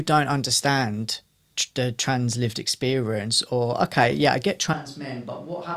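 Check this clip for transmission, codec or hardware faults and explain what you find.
One fault shows up near the end of the speech. At 4.74 s, just after "okay yeah I get", the recording switches to a distant microphone for the rest of the clip. The close microphone's signal has likely dropped out, leaving a pickup further from the talker. The change is abrupt: the level falls by roughly 10 dB, the low end thins out, and the sound turns roomy and hollow, with background noise rising to around 30 dB below the speech.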